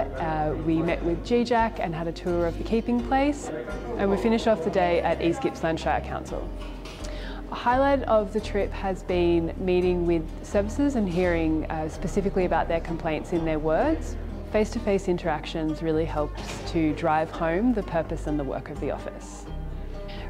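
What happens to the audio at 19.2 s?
Nothing goes wrong at 19.2 s; the audio plays through that moment intact, with no dropout, click or other fault.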